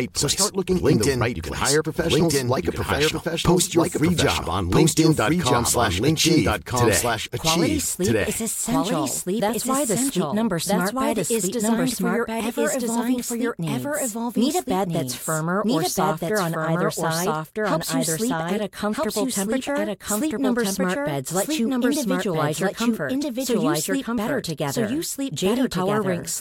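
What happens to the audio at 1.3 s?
At 1.3 s you're inside a doubled audio track that runs through the whole clip. A second, full-band copy of the speech trails by roughly a second and a half at about the same level, with no decay or room colour, likely from a slower capture path or two out-of-step copies in an edit.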